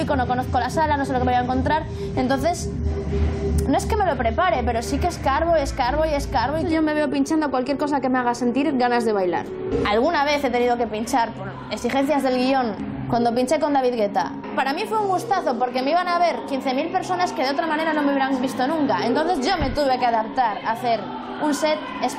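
Nothing in the audio stood out as a technical problem on listening.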